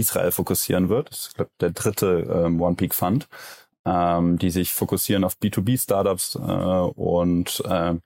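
Nothing in this bit of speech trips the ear, and there's no technical fault to point to anywhere along the way.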